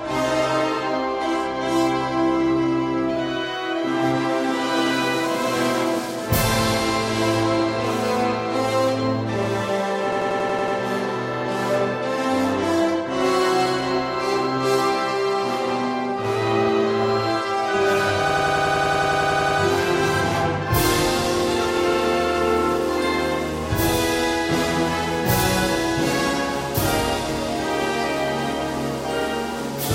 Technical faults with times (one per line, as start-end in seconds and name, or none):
10.12-10.77 system hang loop
18.30-19.60 system hang loop